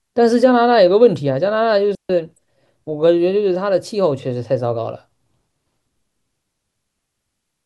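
A digital wireless dropout at 1.95 s mutes the speech for about 145 ms: the receiver lost too much data and faded to a clean, noise-free hole.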